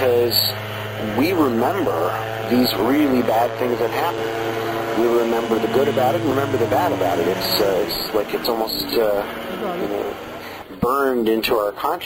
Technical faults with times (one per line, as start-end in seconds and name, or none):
4.18 dropped buffer (overrun)
6.31 dropped buffer (overrun)
8.45 dropped buffer (overrun)